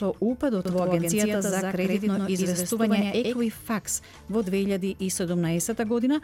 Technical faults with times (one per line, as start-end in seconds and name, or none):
0.65-3.41 doubled audio track